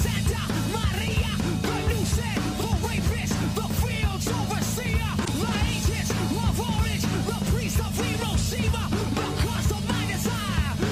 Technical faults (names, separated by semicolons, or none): damaged data in a compressed stream